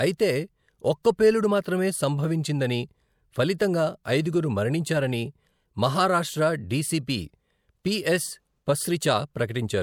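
A speech clip with one pre-echo fault at 1.03 s, just before "పేలుడు మాత్రమే సంభవించిందని ఫలితంగా". A brief hiss, about 18 ms long, leads into a sharp onset. The transform codec spread its quantisation noise across the whole block. That noise leaked ahead of the attack and softened it.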